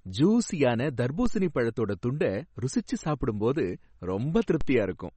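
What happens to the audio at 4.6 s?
At 4.61 s the waveform's zero line jumps in a DC step, then drains away through a highpass near 2 Hz, producing a brief low thump while the speech continues unchanged. Throughout, nothing sounds above 8.4 kHz and the sound is plainly watery and swirly, likely from MP3 compression at a low bitrate around 32 kbps.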